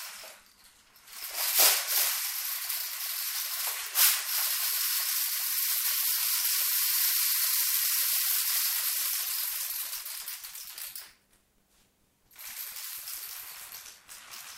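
From 10.49 s to the end at 14.58 s, buffer tearing sets in. Writer and playback have slipped within the ring buffer. Roughly a third of each period replays audio about 20 ms old. Hard joins produce a rattling 93.8 Hz buzz, which fits a 512-sample buffer.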